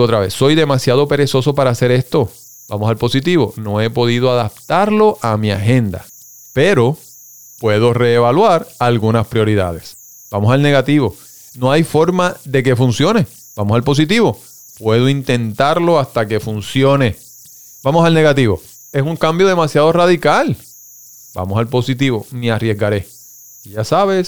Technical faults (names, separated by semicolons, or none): converter idle tones